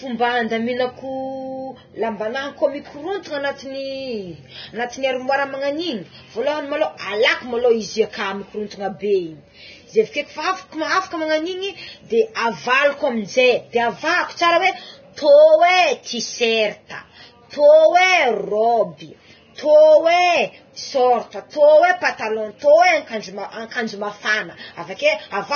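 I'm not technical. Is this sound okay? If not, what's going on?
No. Heavy Vorbis compression runs through the whole clip, from start to finish. The speech sounds hissy and grainy, the bright upper sounds are missing above about 6.6 kHz, and the sharp starts of sounds are smeared. This is likely from saving the recording at a very low quality setting. To save space, the format throws away the top end and keeps only a rough version of the remaining treble, so fine detail turns into gritty noise.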